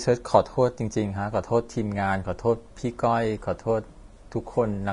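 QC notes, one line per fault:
Throughout: Vorbis compression, likely the cause of the hissy, grainy texture on the speech, with roughened tones and softened consonant attacks. Nothing reaches above 10.6 kHz, and the treble below that has been quantised so coarsely that fine detail turns into noise of similar energy, which fits a low bitrate near 33 kbps. A spectrogram shows a hard ceiling at 10.6 kHz and speckled, patchy upper bands; the waveform shows little change.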